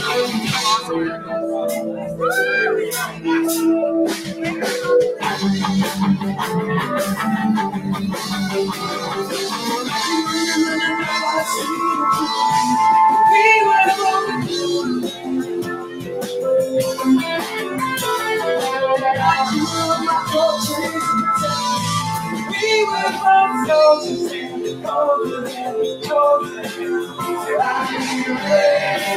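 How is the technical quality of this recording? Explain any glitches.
The technical quality is compromised by a speech noise suppressor that was left running on material it was not designed for.

Noise suppressor applied to music or sounds: throughout the clip, the suppressor treats sustained content as noise and pulls it down, so the level pumps by around 10 dB. On a waveform, the envelope breathes unevenly. On a spectrogram, held partials fade while onsets stay bright.

Sound cut by the noise suppressor: this happens at 0.82–2.2 s, 3.07–3.26 s, 4.17–4.42 s, 7.75–9.92 s, 15.07–16.34 s and 24.35–27.24 s, with drops of about 7 to 11 dB. Steady and decaying passages sink or have their tails chopped. The spectrogram shows dimmed bands and truncated decays, and the waveform shows notches.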